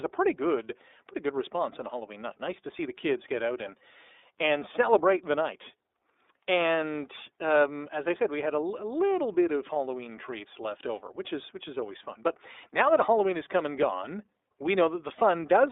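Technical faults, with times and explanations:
Throughout: iLBC codec, speech cut to a 300 Hz to 3.7 kHz band and coded in independent 30 ms frames, sounding rough and synthetic rather than merely muffled, fitting roughly 13 kbps.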